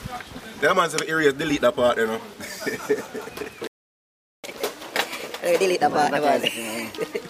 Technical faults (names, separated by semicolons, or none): playback stall; catch-up at higher speed